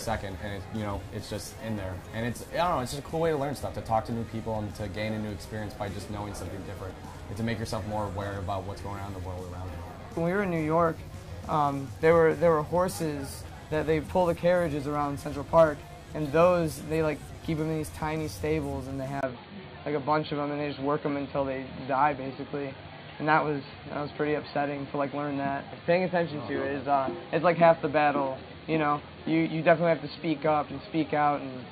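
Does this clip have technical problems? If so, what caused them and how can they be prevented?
Yes. At 19.21 s there is a brief gap of about 20 ms. From then to the end, the sound turns dull and boxy. Nothing is left above 4.6 kHz. A new, faint background noise appears, roughly 35 dB below the signal. The level stays much the same. This points to an input switched to a poorer device, likely a fallback microphone or a headset's call profile. That would explain the narrow band and the changed noise. To prevent it, lock the recording input to one device and disable automatic switching.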